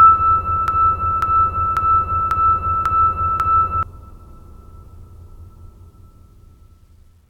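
A music clip with a broken-record loop from 0.68 to 3.83 s: one 0.54 s fragment plays six times back to back, identical each pass, unlike a played repeat or echo. A stalled player or stream likely caused it, and the music for that span is lost.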